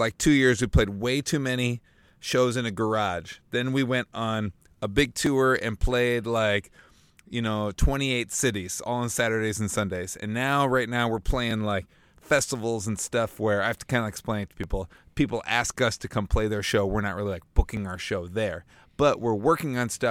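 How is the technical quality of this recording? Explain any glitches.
Clock drift buffer slips run from 2.13 s, after "played way too many", to 17.77 s, before "our show there": about seven clicks every 3.13 s. Likely two separately clocked devices, roughly 500 ppm apart, force a buffer to drop or repeat about 70 samples each time.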